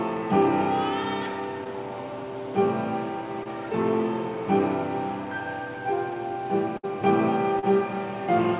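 Short concealed packet loss occurs at 1.64 s, 3.43 s and 7.59 to 7.64 s. Each time, a packet of about 20 ms (about 40 ms at 7.59 s) failed to arrive in time, and the receiver patched the hole by extending the preceding sound before crossfading back. Each one is heard as a brief smear or wobble. On a spectrogram it appears as a thin vertical strip where the harmonics flatten into a copied, slightly blurred pattern, all within the band that stops at 4 kHz, which fits a G.711 narrowband call.

A burst of packet loss runs from 6.77 to 6.85 s. Around 60 ms of consecutive audio was lost, and the receiver stretched the last sound across the gap while fading it down, so the sound turns into a held buzz or dying hiss before resuming further along with that stretch gone. The waveform shows a smoothly decaying, repetitive envelope instead of the natural shape. The spectrogram shows a frozen, fading band ending in an abrupt resumption.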